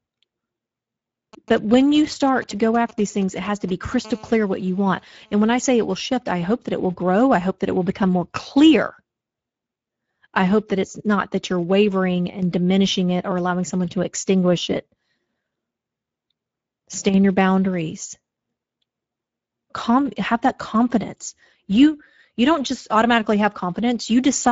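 The whole clip runs through the Speex codec, and you can plainly hear it. The speech has that noisy, hoarse CELP texture, with a thin, shaped hiss up top and nothing above 7.7 kHz. That fits a mid-rate wideband setting, around 17 kbps.

From 1.33 to 3.94 s you get GSM signalling bursts. A nearby 2G phone is talking to its network, and the audio circuitry rectifies those radio pulses into a galloping dit-dit-dit of short 217 Hz buzzes, roughly 20 dB under the speech.

Right after, from 4.05 to 5.80 s, it turns into GSM phone buzz. The phone is now transmitting in bursts 217 times a second as in a call, so you hear a steady, raspy 217 Hz buzz full of harmonics. It has nothing to do with the speech and sits about 29 dB down.

Then there are two brief dips where one channel drops out, from 12.30 to 12.42 s and from 17.09 to 17.14 s. Each is a sudden level drop of about 6 dB, likely one stereo channel vanishing before the mono sum, so only half the shared signal remains.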